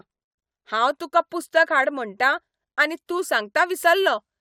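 Nothing technically wrong turns up anywhere in this short bit of speech, so there are no problem spots or causes to point to.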